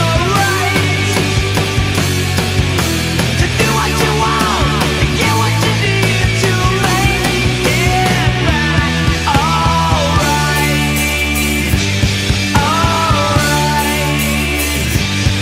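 Nothing stood out as a technical problem on listening to the recording.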